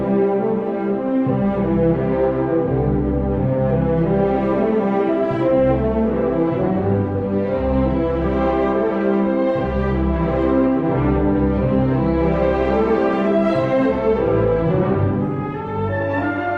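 Nothing stood out on listening, with no moment that drew attention as a fault.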